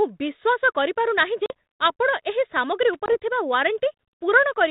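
Speech over an ADPCM telephone path, band-limited below 4 kHz with the light graininess of 32 kbit/s G.726. Packet loss on the ADPCM call leaves hard-edged silent gaps at 1.46–1.52 s (about 40 ms, a couple of packets) and 3.06–3.17 s (about 20 ms, roughly one packet). Afterwards the decoder's predictor and step size are mismatched, so the speech briefly returns slightly distorted. Loose connector crackle appears at 2.93–2.96 s as a short scratchy burst, from a contact intermittently breaking the line.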